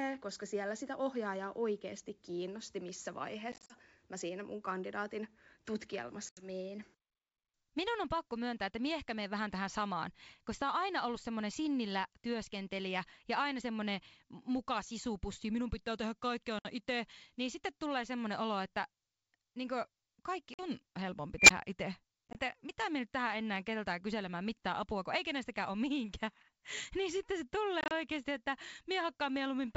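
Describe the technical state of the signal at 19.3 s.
At 19.3 s the speech is intact, with no fault, and the G.722 wideband telephone coding at 64 kbit/s leaves at most faint coding traces there.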